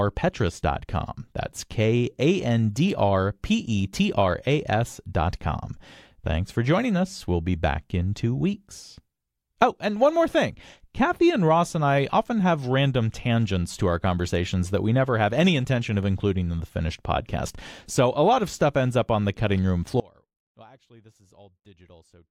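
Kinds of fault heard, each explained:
Audio dropout to a faint residue: at 20.0 s, right after "on the cutting room", the speech cuts off abruptly and does not return before the clip ends at 22.3 s. The gap is not silent. A faint sound remains, roughly 30 dB below the signal's normal level. This likely means the main feed was lost while the downstream path stayed live, passing only a faint residue rather than a clean mute or fade.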